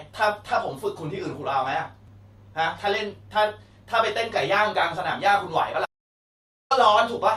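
Audio dropout to silence in this speech from 5.86 to 6.71 s: the input was likely lost mid-recording, leaving 0.85 s of dead silence.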